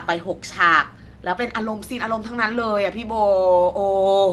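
No technical faults can be heard in this speech, which has come through an Opus call path whose top end stops at around 12 kHz, as that codec's bandwidth setting would give.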